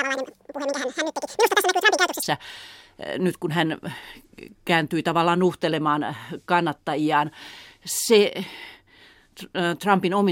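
From the start to 2.23 s, a section at the wrong speed plays at double speed, likely from being fitted to the wrong clock. The speech sounds hurried and chipmunk-high, roughly ten semitones up. Unlike a pure pitch shift, tempo and pitch rise together.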